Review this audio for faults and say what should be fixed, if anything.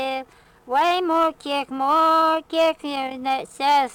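Sample clock jitter runs through the whole clip: a grainy hiss riding on the sound, getting rougher on loud, bright passages and dropping away in quiet. The converter clock wobbles by a few microseconds, leaving error about 35 dB below the signal. Fix it with a cleaner, well-isolated reference clock.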